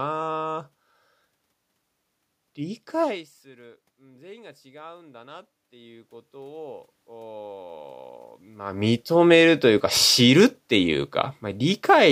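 Speech, with automatic gain rising from 3.56 s to 9.7 s. The voice drops by about 22 dB at the microphone when the talker moves back around 3 s, and the gain control responds by climbing about 11 dB over roughly six seconds, lifting voice and room noise together. On a waveform the envelope swells steadily across that span. On a spectrogram the background noise floor brightens along with the speech. The level shift near 8.5 s comes from the talker moving again.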